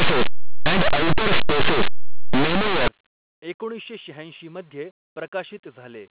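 From 0 to 2.88 s, linear 8-bit audio is read as companded mu-law, so tiny values just on one side of zero blow up into very loud, harsh distortion.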